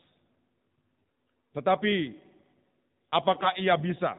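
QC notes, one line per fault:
Throughout: AMR narrowband mobile codec. Nothing passes above 4 kHz, and the speech sounds plainly buzzy and synthetic, which fits AMR-NB at a low rate near 7.4 kbps. On a spectrogram there is a hard ceiling at 4 kHz, with coarse, smeared harmonics below it.
0.99–1.03 s: AMR bit errors. For about 40 ms the speech turns hoarse and gargly while keeping roughly its pitch and level. Flipped low-priority bits misplace the excitation pulses across several consecutive frames. The spectrogram shows broken, noisy harmonics, and the waveform envelope barely changes.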